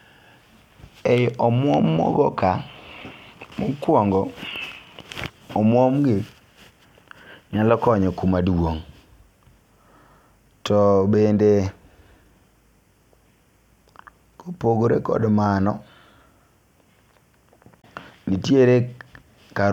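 A short glitch cuts through the speech at 3.83 s, and a longer one follows from 17.78 to 17.85 s. Both are damaged data in a compressed stream. In each spot some of the encoded bytes were corrupted, so the decoder misread those frames and lost its place in the stream. It then had to find the next valid frame header, and the garbled output in between is heard as these brief bursts.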